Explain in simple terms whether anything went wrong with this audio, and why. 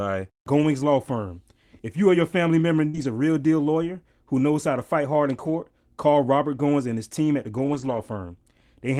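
Two kinds of network damage show up in this speech. At 2.89 to 2.95 s there is a short concealed packet loss: about 40 ms never arrived, so the receiver stretched the preceding sound into a brief smear or wobble. It is a guess, not real audio.

The lost packet rebuilt from error correction is heard at 2.93 to 3.03 s, 5.45 to 5.55 s and 7.57 to 7.99 s. There the audio was restored from a rough backup copy, so there is no gap, but it sounds rougher and noisier.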